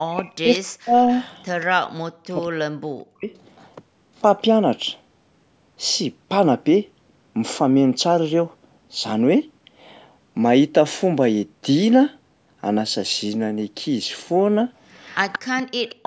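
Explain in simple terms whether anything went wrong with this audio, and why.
Yes, two things went wrong. The first is speech suppressed in double talk. From 0.0 to 0.95 s, 1.79 to 3.31 s and 15.56 s to the end, the voice sinks sharply or drops out. This likely happened because the echo canceller turned down this side's voice along with the loudspeaker echo while both sides talked at once.

The second is echo leak. A faint, delayed copy of the voice comes back about 0.18 s late, at 0.54 to 0.58 s, 1.14 to 1.66 s, 2.41 to 2.45 s and 3.35 to 3.67 s. It returns much louder from 14.92 to 15.94 s. The likely cause is a loudspeaker whose sound the canceller did not fully remove.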